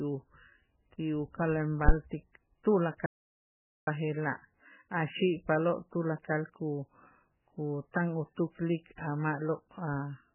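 Throughout the speech, heavy codec damage gives a watery, swirling texture with nothing above 3 kHz, which fits MP3 compression at a very low bitrate near 8 kbps. From 1.89 to 1.94 s, a phantom power thump occurs: a supply switched on or off on a live input steps through the coupling capacitors, producing a deep thump decaying in about 12 ms. From 3.06 to 3.87 s, an audio dropout to silence cuts the sound for about 0.81 s with no room tone, likely from lost input through disconnection, link failure or muting.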